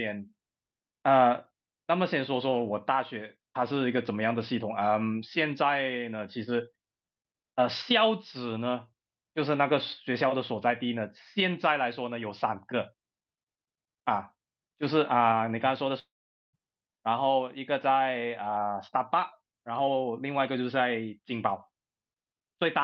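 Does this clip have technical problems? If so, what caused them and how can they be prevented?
Yes. Between 15.99 and 16.55 s the speech dissolves into a fading concealment buzz, then near silence, before resuming with about 0.54 s missing, likely a long network dropout. Prevent it with a steadier network link, forward error correction, and redundancy on the call path.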